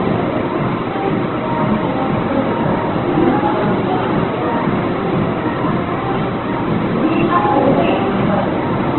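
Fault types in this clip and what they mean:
Opus compression: heavy, grainy, rough degradation with nothing above 4.2 kHz. Unlike MP3's swirling, the bands stay filled with noise instead of leaving holes. This is likely a music-mode Opus encode at a very low rate, consistent with around 12 kbps.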